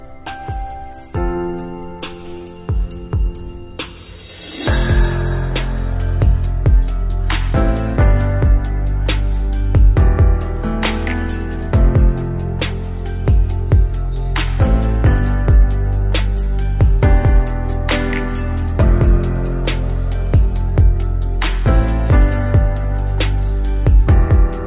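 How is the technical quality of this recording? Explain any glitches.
No glitches or faults detected.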